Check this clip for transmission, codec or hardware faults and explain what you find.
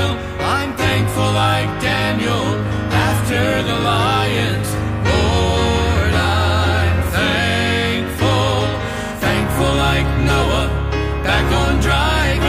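No transmission or hardware faults can be heard here.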